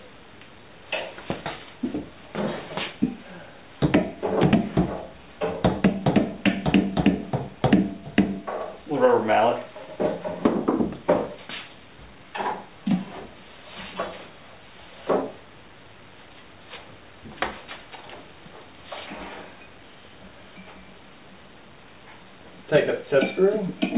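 No technical faults can be heard anywhere in this audio.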